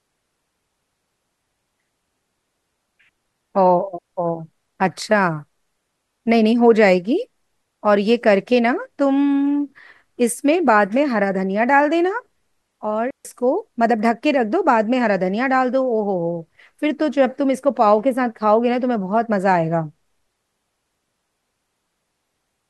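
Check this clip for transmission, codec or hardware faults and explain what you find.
Digital wireless dropout at 3.98 to 4.13 s and again at 13.11 to 13.25 s. Each time the radio link lost more data than the receiver could recover, so it muted its output with a very fast fade rather than pass corrupted audio. The result is a clean hole in the speech lasting about 143 ms, near silence with no crackle, burst or noise on either side, before the sound resumes as abruptly as it stopped.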